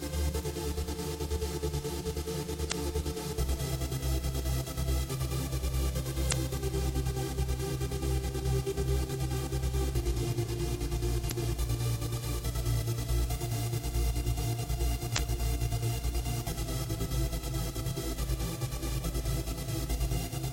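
Brief glitches, each about 40 ms long, break into the audio at 2.68–2.72, 6.28–6.33, 11.27–11.32 and 15.14–15.18 s: damaged data in a compressed stream makes the decoder misread frames and lose sync.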